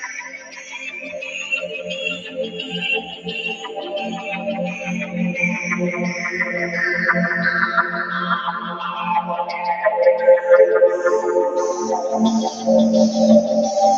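Across the whole clip the sound pumps and thins, with sustained parts and decays dipping while sharp onsets stay near full level. The level swings by around 10 dB. This is a noise suppressor applied to music or sounds: a processor built for speech was left active, and it reads steady tones, ambience and tails as background noise, so it keeps pulling them down between transients.

From 0.2 to 1.33 s the sound sinks, about 11 dB down at its deepest, over roughly a second. Shorter dips follow at 2.18 to 2.37 s (about 7 dB), 3.02 to 3.26 s (about 10 dB) and 3.55 to 3.71 s (about 7 dB), each lasting around a fifth of a second or less. These are sounds cut by the noise suppressor. Here it treated the held or fading material as noise and attenuated it harder than the rest, so the body of these sounds drops away.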